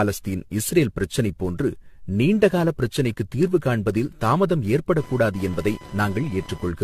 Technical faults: generation loss; computer activity noise

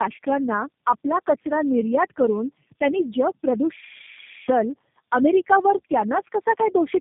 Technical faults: tandem speech coding

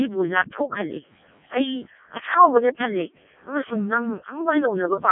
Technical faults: Codec 2 vocoder

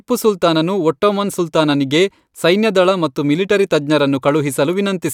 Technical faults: none

